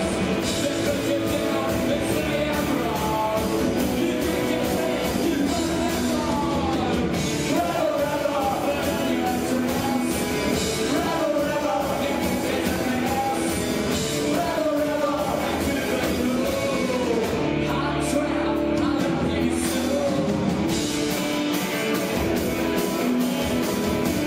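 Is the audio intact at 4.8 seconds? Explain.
No, there is a brief skip at 4.77 s, an overlap between stream segments: overlapping time stamps at a segment boundary, consistent with 4-second segments, made the player discard a few milliseconds of real audio, so the waveform jumps.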